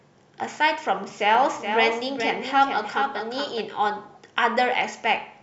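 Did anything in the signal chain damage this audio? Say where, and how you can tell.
Yes. From 1.35 s to 3.61 s the speech is shadowed by a dry, full-band copy about 400 ms late and roughly 5 dB quieter, cutting in and out abruptly. This doubled audio track likely comes from the capture stage recording the signal twice through a slower path.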